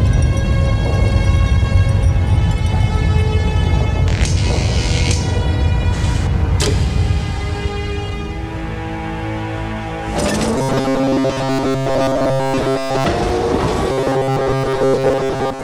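From 10.56 to 13.05 s and again from 13.92 s to the end, the audio turns into a rigid metallic buzz at 134 Hz, robotic sound likely from repeating a roughly 7.5 ms buffer in place of most new audio.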